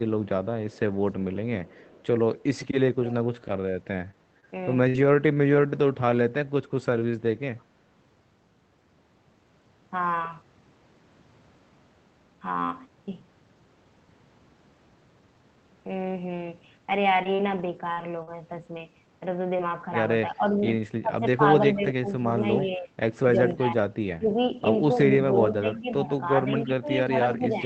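Echo leak at 0.25–0.79 s and 1.34–2.03 s: a faint delayed copy of the speech trails it by 320 ms, about 30 dB down, likely loudspeaker sound the far end's echo canceller failed to remove.

Speech suppressed in double talk at 3.01–3.17 s: the level dips by about 10 dB for roughly 150 ms, likely as the canceller turns down the talker while treating both sides as echo.

Repeated packet loss (robotic sound) at 4.11–4.96 s: three gaps, the longest 57 ms, are patched by stretching the preceding sound. The result is choppy, with pieces missing.

A brief echo leak recurs at 7.59–7.64 s, again 320 ms behind and fainter, about 40 dB down.

Scattered short gaps at 16.91–19.71 s: around five isolated losses, none longer than about 40 ms, are each filled by continuing the last sound. They leave small hiccups and smears in otherwise clear audio.

Speech suppressed in double talk at 20.32–24.37 s: during simultaneous talking the speech drops by up to about 15 dB, across roughly one and a half seconds in total.

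The same suppression returns from 25.01 s to the end, dipping about 10 dB. Within it, an echo leak at 25.34–25.80 s is the strongest in the clip, about 25 dB down, still 320 ms late. All of this is heard through the call codec, whose band stops at 8 kHz.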